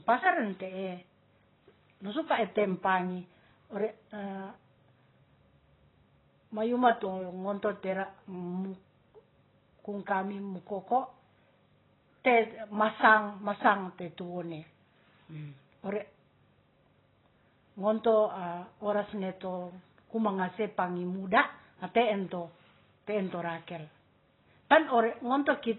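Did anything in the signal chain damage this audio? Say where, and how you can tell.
Yes: throughout, this speech sounds dull and smeared, with nothing above 4 kHz and fizzy sibilants, likely AAC compression at a very low bitrate; a spectrogram shows a hard shelf and patchy bands.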